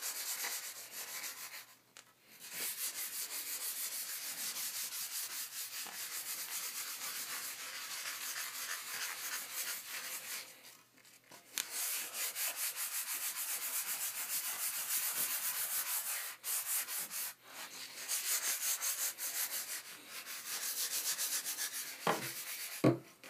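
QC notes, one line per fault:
Throughout: channel delay (comb filtering). One channel lags by around 20 ms before mono summing, cutting evenly spaced notches from near 20 Hz upward, giving a rough, slightly doubled sound.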